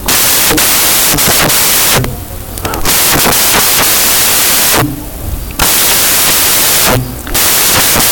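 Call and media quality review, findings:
Samples built from the wrong bytes, whole clip. Loud, harsh broadband noise replaces the speech. Probable component: PCM reader or decoder. Bytes of each sample assembled wrongly, by a one-byte offset, swapped byte order or wrong alignment. Fast-changing low bits land in the high part of each value. Result behaves as noise, not as a degraded signal. Check endianness and sample framing.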